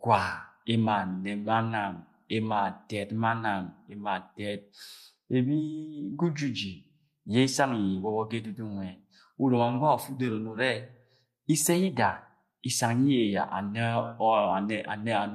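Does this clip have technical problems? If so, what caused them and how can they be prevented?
No, there are no technical problems in this recording.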